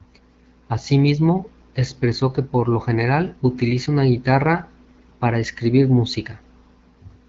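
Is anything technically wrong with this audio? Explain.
No, nothing is technically wrong.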